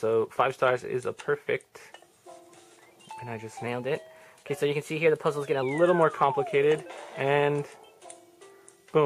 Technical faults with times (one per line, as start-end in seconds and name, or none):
3.66-5.62 wrong sample rate